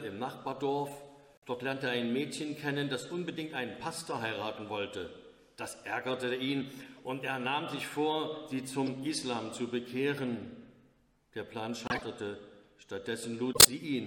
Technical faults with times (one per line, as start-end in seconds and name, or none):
1.33-1.46 corrupt frame decoded
6.97-7.00 corrupt frame decoded
8.86 corrupt frame decoded
11.86-12.02 corrupt frame decoded
13.53-13.68 corrupt frame decoded